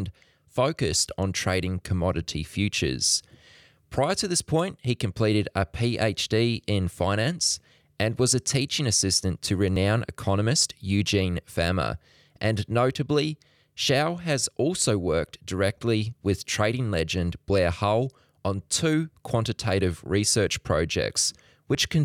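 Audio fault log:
9.76 s, 15.76 s, 21.75 s: audio missing between chunks. Three brief skips in the speech, the first just after "a teaching assistant to" and the second between "has also worked" and "with trading legend." Each loses only a few milliseconds, and the two sides are butted together with no gap. The even 6.0 s spacing points to a recorder or processor handling the audio in 6-second blocks and likely dropping a sliver at each block boundary.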